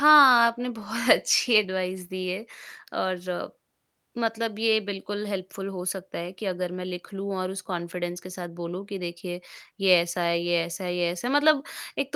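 Nothing in the speech stood out as a technical fault on listening.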